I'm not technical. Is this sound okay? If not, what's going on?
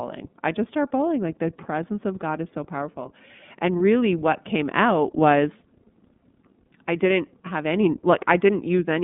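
No. Throughout, the iLBC codec makes the speech narrow and slightly rough and synthetic, with nothing above about 3.7 kHz. That roughness sets it apart from an ordinary muffled phone line.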